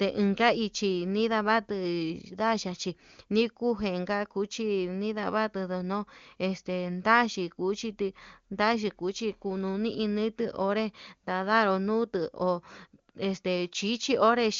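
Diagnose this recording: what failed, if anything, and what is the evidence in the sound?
Nothing failed in this recording, and the sound carries no evidence of a fault at any stage.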